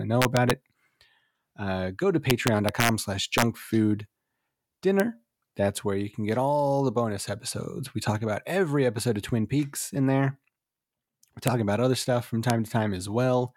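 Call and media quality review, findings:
Integer overflow: 0.22–0.51 s after "to know", 2.30–2.89 s after "go to", 3.38–3.42 s, 5.00 s, 11.48 s before "about other stuff from", 12.50 s. Violent cracks on speech peaks. Gain or mix stage overshoots by up to about 2 dB and wraps to the opposite sign instead of saturating. Likely unclamped fixed-point arithmetic.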